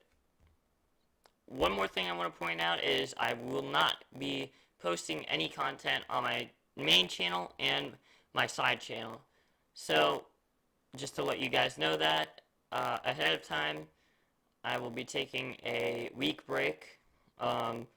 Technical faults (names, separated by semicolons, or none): block size mismatch (padded)